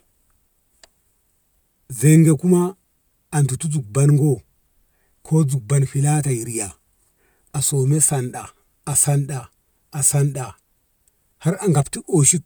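No technical faults can be heard in this recording.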